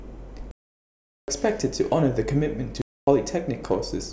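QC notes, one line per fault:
0.51 to 1.28 s, block of digital silence: the speech drops straight to silence for about 0.77 s and comes back with no fade either side, leaving a clear hole. Looks like the output buffer wasn't filled in time.
2.82 to 3.07 s, block of digital silence: same thing again, shorter at 256 ms, which fits a 4096-sample block going unfilled. Hard cut to silence.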